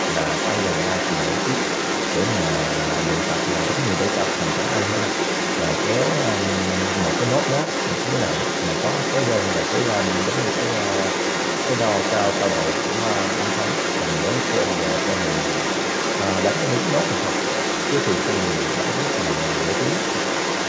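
From 0.0 to 20.69 s, throughout the recording, the echo canceller likely failed to strip the far end's loudspeaker playback out of the microphone feed. The result is a second voice leaking through the whole time, at roughly the same loudness as the talker, so the two overlap rather than one sitting clearly behind the other. The leaked voice shares the call path's band limit, with nothing above 8 kHz.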